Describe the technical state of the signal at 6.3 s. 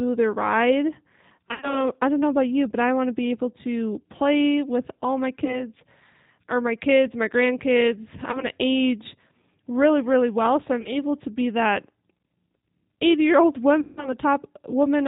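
At 6.3 s the speech carries G.729 codec damage, as it does throughout. The codec rebuilds speech from a vocal tract model and sparse pulses, with nothing above 4 kHz. The sound is plainly rough and synthetic, consistent with about 8 kbit/s.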